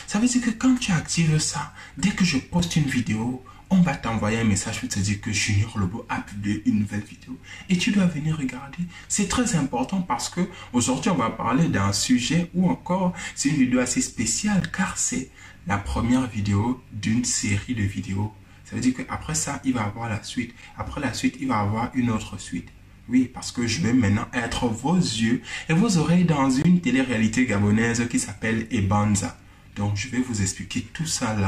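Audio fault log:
2.59, 8.60, 14.60, 20.62 and 26.62–26.65 s: gap between stream segments, hard-edged silent holes of 3 to 22 ms every 6 s, where segment timestamps don't meet and the player pads with silence.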